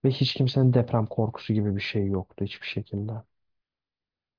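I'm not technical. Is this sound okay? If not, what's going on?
Yes, this one's fine: nothing in it jumps out as a problem, so there's nothing to worry about here.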